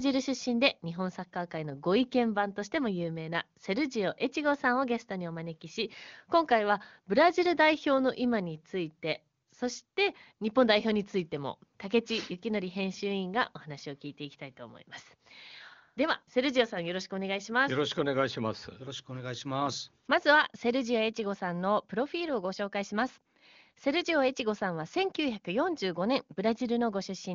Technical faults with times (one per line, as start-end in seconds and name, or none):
none